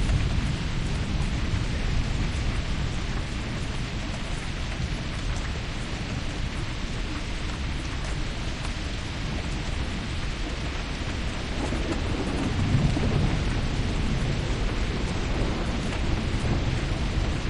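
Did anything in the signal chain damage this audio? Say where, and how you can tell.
Yes, there's damaged data in a compressed stream, so the fault sits at the codec stage, in the encoded file or stream before it was decoded. You get two very brief disturbances in the sounds, at about 7.55 s and 10.50 s, each under 20 ms. At both points some of the compressed bytes were corrupted. The decoder hit frames it couldn't read properly, lost sync, and had to hunt for the next valid frame header before playback settled again.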